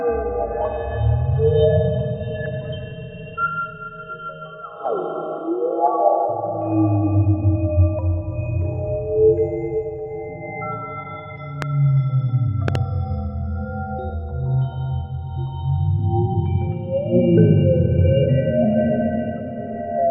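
A recording of everyday sounds with a loud pop at 11.62 to 11.64 s and a double pop at 12.68 to 12.77 s, each roughly 15 dB above the surrounding audio, likely from an electrical pulse such as a switch or static. Unlike a dropout, the sound continues uninterrupted beneath both pops.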